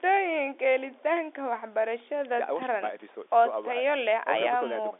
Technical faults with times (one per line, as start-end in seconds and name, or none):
none